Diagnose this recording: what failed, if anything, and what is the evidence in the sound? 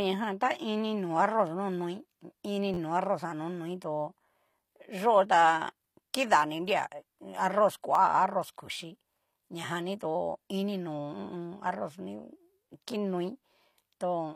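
Codec stage: the treble sounds rebuilt rather than real, with nothing above 14.9 kHz and plainly audible codec damage across the whole speech clip. That points to likely HE-AAC at a low bitrate, where spectral band replication copies lower bands upward, so s sounds come out synthetic.

Driver or buffer stage: there are short stutters at 2.74, 5.89 and 7.95 s. A chunk of about 11.6 ms, which fits a 512-sample buffer, plays again three, two and then one extra time, with hard joins. This is a repeated buffer, and essentially no audio is lost.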